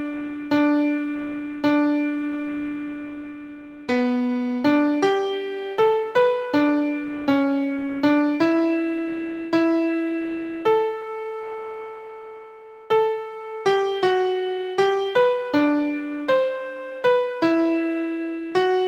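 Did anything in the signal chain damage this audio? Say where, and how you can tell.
No, no stage in the chain damaged this audio.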